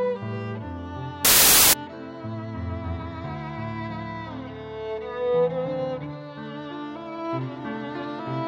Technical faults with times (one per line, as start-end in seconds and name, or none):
1.25-1.73 samples built from the wrong bytes